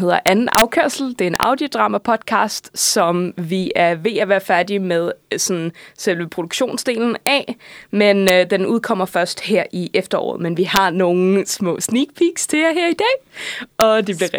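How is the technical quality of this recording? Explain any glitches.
The recording has a recurring integer overflow fault. It cracks violently on loud speech at 0.27–0.62 s (about 6 dB over), at 1.36–1.43 s, and at 7.27 s after "øh sådan selve produktionsdelen", 8.28 s, 10.76 s and 13.81 s (about 1–2 dB over). Peaks wrap to the opposite sign instead of being limited, so they sound harsher and sharper than flat-topped clipping.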